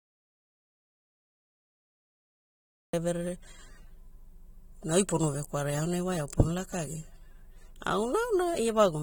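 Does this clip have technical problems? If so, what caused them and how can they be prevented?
Yes, there's an audio dropout to silence right at the top: the clip opens in dead silence with no room tone at all, and the speech doesn't arrive until about 2.93 s. Since it's already silent from 0.0 s, whatever was said before then is simply gone. That silence suggests the input was likely cut off, through a loose cable, a link that hadn't come up yet or a mute left on. To prevent it, check the input and start a quick test recording before rolling.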